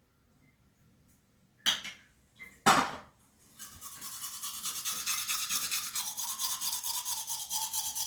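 An everyday-sound recording with plainly audible Opus compression from start to finish. The top end still reaches all the way up, cutting off only around 20.1 kHz, so it isn't muffled or narrowed. Instead, tonal parts come across rough and grainy, with a noisy fizz where clean detail should be. That's likely the music-mode encoder running short of bits and patching bands with folded or noise-filled content, which fits a low rate around 24 kbps.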